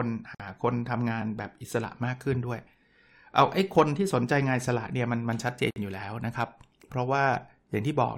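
It's a speech clip with two gaps at a join of encoded pieces: about 50 ms of silence from 0.35 to 0.40 s, and about 55 ms from 5.71 to 5.76 s. Separately encoded chunks were butted together with their start-up delay and end padding left in, so the sound drops out and then picks up exactly where it left off.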